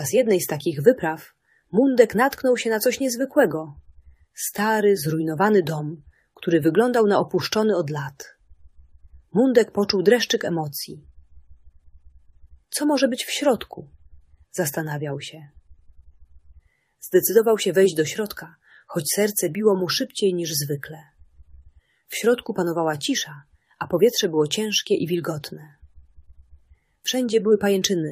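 No audible technical faults anywhere in this audio.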